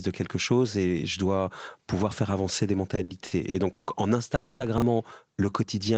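From 2.95 to 3.90 s the speech catches and drags in a series of small hiccups, a repeated stall or stutter. Five times the sound hangs on what it was just producing, the longest hold about 150 ms. Together these fill 320 ms, roughly a third of that stretch. Packets were reaching the receiver more slowly than they were played out, so the jitter buffer kept running dry. Each time, the receiver extended the last sound until data arrived, so nothing is lost but the pace stumbles.

Inside that stretch, at 3.24 to 3.29 s, a brief garbled moment marks chunks played out of order. A piece of about 21 ms arrived one chunk late and played after the audio that should follow it. Nothing is dropped, but the sequence is scrambled, and the misplaced chunk meets its neighbours at hard, unmatched joins.

From 4.35 to 4.63 s the speech stops moving forward and the last sound is drawn out as a fading buzz or hiss for about 250 ms. 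There is no true silence, and the speech then resumes exactly where it left off. This is a call audio freeze, likely caused by packets held up in transit that emptied the jitter buffer. The receiver covered the wait by continuing the last sound, which adds about 250 ms of delay without losing anything.

At 4.78 to 4.82 s another short jumbled moment occurs where a second chunk of about 21 ms came one chunk late and was played out of its proper order.

In the final half second, from 5.46 to 5.96 s, the speech slows to about 92% of its pace while the pitch stays the same. Sounds are drawn out. This is a jitter buffer slow-down. The buffer was low or had just raised its target delay, so the receiver repeated individual pitch periods to rebuild its reserve, adding about 49 ms. The Opus codec's 8 kHz bandwidth limits the top end throughout.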